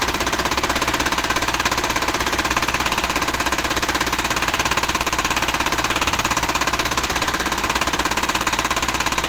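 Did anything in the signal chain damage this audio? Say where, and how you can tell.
Yes. Opus compression damage runs through the whole clip, and the codec stage is the likely source. The codec artefacts are plainly audible: the sound turns rough and grainy, with a hoarse, muffled coarseness rather than MP3-style swirling. That points to Opus in its hybrid mode, which codes the lower band speech-style and fills the upper bands by energy, as it does at a low bitrate around 16 kbps. The bandwidth stays wide, with content reaching about 20.2 kHz.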